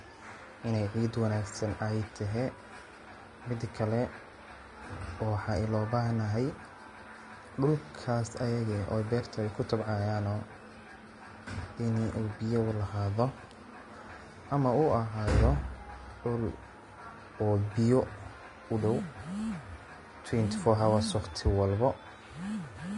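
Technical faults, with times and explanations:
Throughout: Vorbis compression. The speech has nothing above about 10.6 kHz, and the remaining upper band sounds hissy and grainy, with roughened tones and smeared consonant onsets. The likely cause is low-quality Vorbis encoding, which fits a rate of around 32 kbps. The encoder pulls its cut-off down and quantises the treble residue so coarsely that fine detail is swapped for noise of similar energy, so the damage is plainly audible.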